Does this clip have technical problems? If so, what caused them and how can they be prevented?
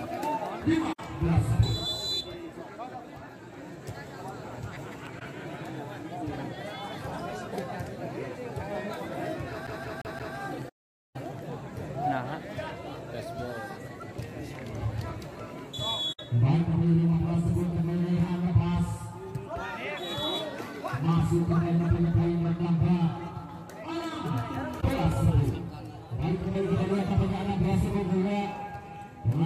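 Yes. Five soft-edged dropouts occur at 0.92 to 1.00 s (64 ms), 5.19 to 5.22 s (21 ms), 10.68 to 11.16 s (469 ms), 16.12 to 16.20 s (64 ms) and 24.80 to 24.84 s (21 ms). The sound fades out and back in. This is AAC frame loss with muting. Whole coded frames never reached the decoder, which fits about 21 ms per frame, so it replaced their spectrum with silence. The overlapping transform windows then blended each gap into a gentle fade. The long 469 ms hole is a burst of consecutive losses. To prevent it, use a reliable transport with retransmission or error correction, or record locally rather than over a lossy stream.

From 9.00 to 11.53 s there is a steady ticking of near-identical clicks, about 7.7 per second and evenly spaced, roughly fifteen in all. They reach about the level of the sound itself and stand out even where it drops away. This train of clicks most likely comes from electrical interference from nearby equipment or a faulty connection or power supply. 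To prevent it, move or shield the offending equipment and fix the grounding.

Within that stretch, from 9.67 to 10.36 s, the same 174 ms fragment plays four times in a row with a brief mute at each restart. This produces the rapid, even stutter of a CD stuck on one turn. A scratch sends the laser back one track at the same point on every rotation, so the player keeps returning to the same moment. To prevent it, clean or replace the disc and rip it with a secure, error-checking extraction tool.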